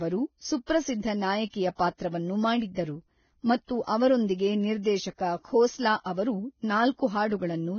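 Speech with heavy low-bitrate codec damage throughout, likely Vorbis compression. Nothing is heard above 6.5 kHz, and the remaining upper band is coarsely quantised, so fine detail turns to grainy hiss and the voice sounds rough, which fits a bitrate around 17 kbps. Pre-echo appears at 0.66–0.69 s, 1.50–1.54 s and 2.74–2.77 s. Before each attack there is a brief hiss of 26, 35 and 25 ms respectively, where quantisation noise spread across the transform block leaks ahead of the onset and softens it.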